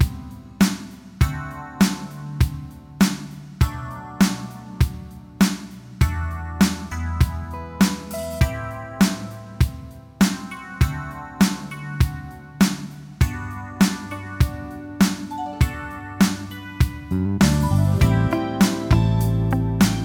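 No technical faults can be heard in this audio.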